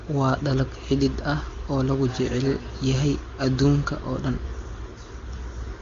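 No technical faults can be heard in this speech.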